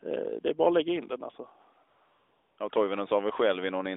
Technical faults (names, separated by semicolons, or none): AMR comfort noise